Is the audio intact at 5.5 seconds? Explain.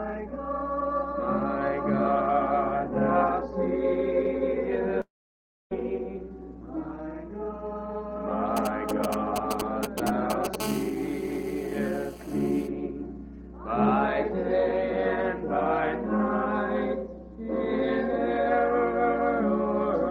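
No. At 5.5 seconds the audio is broken by a long network dropout running from 5.01 to 5.73 s. The sound at 5.01 s is briefly stretched into a fading buzz or hiss. Silence takes over almost at once and covers about 640 ms of the gap. About 0.7 s of audio is lost. The likely cause is packets that never reached the receiver, so it had nothing to play. Audio resumes at 5.73 s without the missing part.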